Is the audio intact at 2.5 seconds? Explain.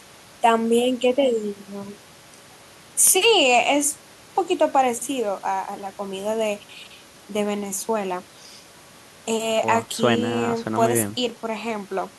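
Yes, the speech at 2.5 seconds plays through cleanly, with no dropout, click, distortion or other fault audible at that point.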